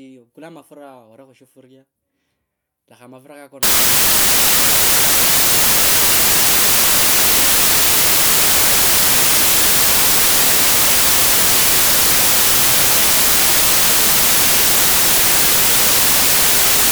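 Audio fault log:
3.63–16.92 s, samples built from the wrong bytes: from here to the end the speech turns into loud, harsh broadband noise, because each sample is assembled from misaligned or swapped bytes, so the rapidly varying low bits become the dominant part of every value.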